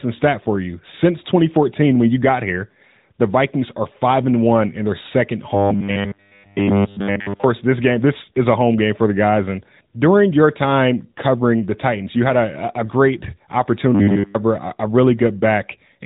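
From start to finish the speech carries the AMR narrowband mobile codec, running at 10.2 kbps with plainly audible damage. The signal is band-limited, with nothing above 3.8 kHz. The voice is rebuilt from a vocal-tract model excited by sparse pulses, so it sounds thin, buzzy and synthetic. That texture is steady across the whole clip and follows the speech's own pitch, which separates it from the fixed-pitch buzz that appears later.

From 5.55 to 7.44 s, after "one in their second" and before "this game this is", the speech collapses into a rigid metallic drone at 100 Hz. All of this stretch is repeated material. This is robotic sound from repeated short buffers, likely caused by audio arriving too seldom, so a 10 ms slice was looped while the real audio was skipped. Unlike the codec's buzziness, this pitch does not move with the voice. The same 100 Hz drone returns from 13.95 to 14.35 s, just before "a a".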